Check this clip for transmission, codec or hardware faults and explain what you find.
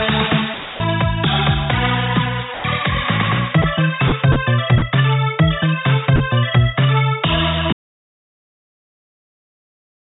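Two faults stand out: the sound keeps getting swapped out for noise in short bursts, and then it drops to dead silence for the rest of the clip. All of it comes through a call path band-limited to nothing above 4 kHz, which fits G.711 mu-law at 64 kbps.

The first is sound dropped by the voice detector, at 0.54 to 0.80 s, 2.54 to 2.64 s, 3.62 to 3.64 s, 4.08 to 4.12 s, 4.32 to 4.36 s, 4.78 to 4.82 s and 6.16 to 6.20 s. These gaps run from 20 ms to 260 ms. In each one, the actual sound is replaced by steady comfort noise and picks back up when the detector reopens. The likely cause is the sender's voice detector deciding the sound was background and pausing transmission, with the receiver filling the hole with generated noise.

The second is an audio dropout to silence starting at 7.73 s and running to the end. The sound just cuts out mid-flow, and there's no room tone left, only silence. 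Whatever happened after that point is gone. The likely cause is a lost input, such as a disconnected device, a failed link or an accidental mute, while the recorder kept writing silence.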